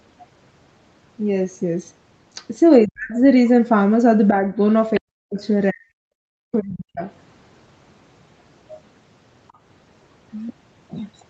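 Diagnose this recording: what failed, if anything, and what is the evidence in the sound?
Call processing stage, speech suppressed in double talk: the speech drops out almost completely, by around 40 dB, at 2.85–3.17 s, 5.0–5.42 s and 5.71–7.03 s, with a slight dip at 4.29–4.56 s. Likely the echo canceller, hearing both parties at once, attenuated the near talker along with the echo.

Same stage, other side's voice leaking through: a brief scrap of a second voice, roughly 20 dB below the speech, is audible at 4.95–5.0 s, just before the suppression at 5.0 s. This is likely residual loudspeaker echo that the canceller failed to remove from the microphone signal.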